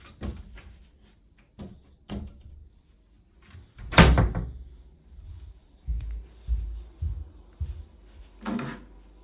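Aliasing runs through the whole clip. The sound points to a rate reduction from 44.1 kHz down to 8 kHz with no anti-alias filter beforehand, so everything above the 4 kHz fold point was reflected back downward onto false, unrelated frequencies. Those folded components sit roughly 20 dB below the wanted sound. They give bright, noisy parts of these sounds a gritty, metallic edge, and the spectrum runs hard up against the 4 kHz ceiling instead of rolling off.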